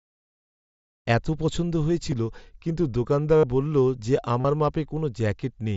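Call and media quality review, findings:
Concealed Bluetooth headset packet loss on the headset link, three spots. Brief blip at 2.10 s after "জ্যাকেটটা আমার এত পছন্দ". Buzzy held tone at 3.37 to 3.44 s, about 70 ms, right before "বললো যে". Another at 4.41 to 4.45 s, about 38 ms, just after "বললো যে". The phone fills each gap by repeating the last bit of the waveform, so there's a slight warble when real speech returns, all over the normal band-limited mSBC sound.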